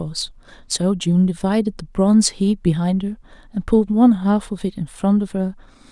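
No technical faults are audible.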